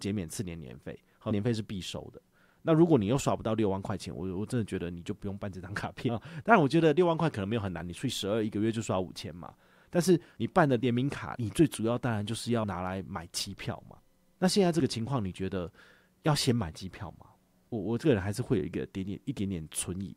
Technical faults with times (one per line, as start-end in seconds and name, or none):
1.30 damaged data in a compressed stream
6.08 damaged data in a compressed stream
12.63 damaged data in a compressed stream